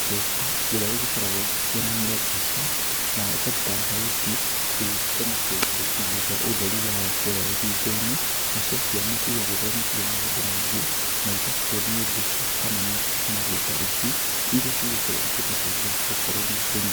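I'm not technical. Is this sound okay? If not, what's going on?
No. From start to finish there is low bit depth with dither: the speech uses only 4 bits, and added noise hides the rounding as a constant, even hiss.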